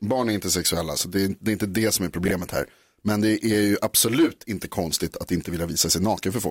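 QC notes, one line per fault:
2.25–2.31 s frames out of order: two neighbouring blocks of about 26 ms were decoded in swapped order, causing a brief garbled flutter.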